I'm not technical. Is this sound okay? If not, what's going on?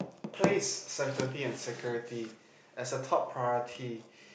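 Yes, no faults are audible.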